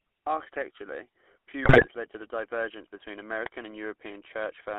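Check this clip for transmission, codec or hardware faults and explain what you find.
Three faults are present: GSM full-rate coding across the whole clip, a burst of GSM bit errors, and one uninitialised-buffer click.

GSM full-rate codec, throughout: the speech was squeezed through the original GSM vocal-tract model at what fits a 13 kbps full-rate stream, inside a 300 Hz to 3.4 kHz line band. The coarse pulse excitation leaves the voice plainly buzzy and gravelly, with no top end.

GSM bit errors, 1.62 to 1.87 s, just before "led to a divergence": corrupted bits reached the decoder, consistent with an error rate around 4 percent over roughly a dozen frames. Damaged filter, pitch and gain values make the speech squawk and gargle, with level jumps.

Uninitialised buffer, 3.46 s, just after "to a divergence between": a block was played before audio was written into it, which fits a 64-sample block lasting 1.33 ms. 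Leftover memory comes out as a brief, loud crack.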